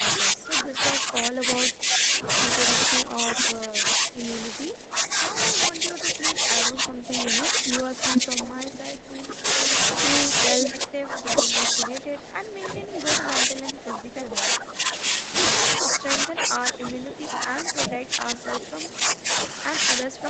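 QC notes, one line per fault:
Throughout: speech suppressed in double talk. The voice repeatedly dips, thins out or breaks into pieces, at its deepest by about 20 dB. The likely cause is an echo canceller that could not tell this talker from loudspeaker echo while the far side spoke, so it turned both down. Packet loss would leave clicks, gaps or smeared tails. These losses are level drops that ride the talker's own phrases.
3.37–3.93 s, 8.13–8.79 s and 9.71–11.42 s: echo leak. A copy of the voice returns about 0.4 s late, the same delay each time. The first scrap is faint, about 15 dB under the speech. The later two come back roughly as loud as the speech and last longer, the third about 1.7 s. This is likely loudspeaker sound that got past the loudspeaker side's echo canceller. Room reverberation would be a smooth decaying tail, but this is a distinct, delayed repeat.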